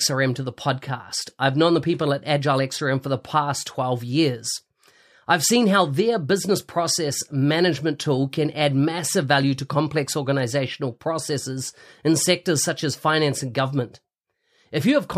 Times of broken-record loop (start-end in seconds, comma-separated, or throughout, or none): none